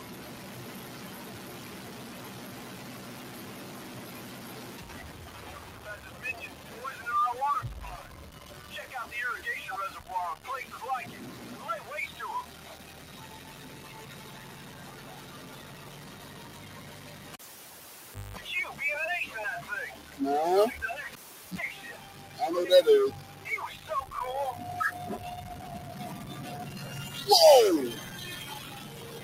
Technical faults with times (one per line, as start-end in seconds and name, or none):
0.00-29.23 stuck bit
0.00-29.23 noise suppressor applied to music or sounds
17.33-18.37 cable pulled and plugged in
21.13-21.58 cable pulled and plugged in